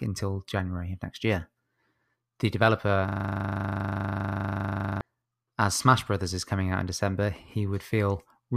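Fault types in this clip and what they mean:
System hang loop: the system or its audio driver froze while the sound card kept replaying its last buffer. From 3.08 to 5.01 s, one 40 ms slice of speech repeats dozens of times. Looping at 25 Hz, it sounds like a rough, steady buzz.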